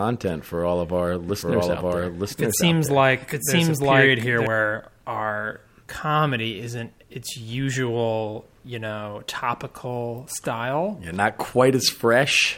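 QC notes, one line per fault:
1.29–4.47 s, doubled audio track: right after "for all of our", a second, equally loud copy of the speech trails about a second behind, dry and full-band, and drops out abruptly before "our comedy isn't its". This is likely a second capture through a slower path.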